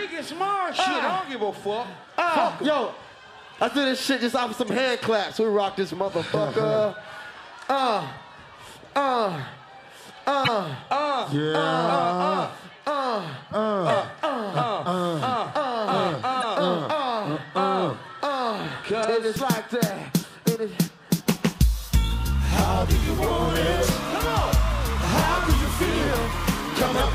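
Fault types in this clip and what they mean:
Damaged data in a compressed stream: corrupted frames throw the decoder out of sync, giving five brief blips, around 4.67, 10.44, 16.41, 19.01 and 26.97 s.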